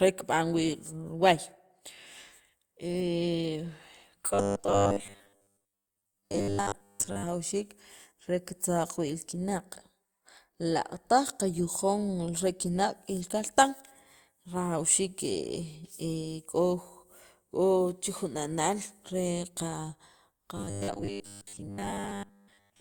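From 4.34 to 7.24 s, and again from 20.57 s to 22.8 s, the speech collapses into robotic sound from repeated short buffers: a stiff, metallic 100 Hz buzz that loosely tracks the words. Most of the time in these stretches is likely filled by looping a 10 ms slice while fresh audio is dropped. A spectrogram shows evenly spaced horizontal harmonics at multiples of 100 Hz, and the waveform shows identical short cycles repeating.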